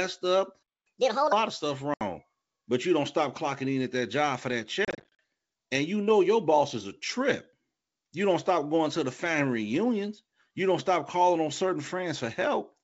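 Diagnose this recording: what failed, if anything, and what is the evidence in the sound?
Playback stall at 0.62 to 0.87 s: the speech cuts to silence for about 0.23 s, likely because the player's buffer ran dry or its output thread was blocked.

Catch-up at higher speed from 0.87 to 1.32 s, ending just before "of stuff": the player resamples its backlog at 1.5x, raising pitch roughly seven semitones until it catches up.

Packet loss on an ADPCM call over the network: a 70 ms hard-edged hole at 1.94 s after "of stuff", then 190 ms of gaps scattered across 4.85 to 5.19 s, runs up to 40 ms, between "that job for that" and "and you know your". This points to about twenty-seven lost packets. The G.722 decoder's predictor and step size lose sync, so the speech returns slightly distorted before settling.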